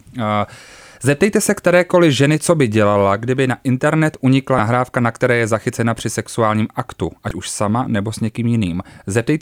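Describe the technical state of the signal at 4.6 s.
At 4.6 s the signal carries damaged data in a compressed stream, spanning 4.56 to 4.60 s. Corrupted bytes in the encoded frames there cause the decoder to misread them and lose sync until it finds a valid frame header, producing a short blip in the speech.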